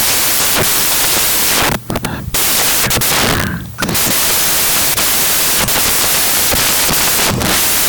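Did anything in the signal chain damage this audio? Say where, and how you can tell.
Yes. Throughout the speech, loud, harsh broadband noise runs through the signal. That points to sample-format conversion: samples built from the wrong bytes, with order or alignment misread so the rapidly changing low bits dominate each value.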